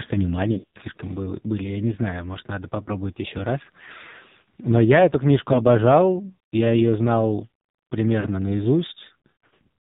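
AMR narrowband mobile codec, throughout: the speech is squeezed into an 8 kHz-sampled vocal-tract model with nothing above 4 kHz, and the heavy buzzy, synthetic quality fits a low mode around 5.9 kbps, where too few pulses per subframe are left to rebuild the voice.

Lost AMR speech frames, from 0.52 to 0.82 s just before "были я не знаю", then 2.84 to 2.88 s between "не знаю может надо" and "еще раз", 5.54 to 5.61 s after "я эту книжку", and 8.20 to 8.27 s: failed frames make the decoder repeat its last pitch and tract settings at falling gain. The first stretch, where about 200 ms is lost across scattered short runs, smears and dips repeatedly. The later short gaps give brief warbles.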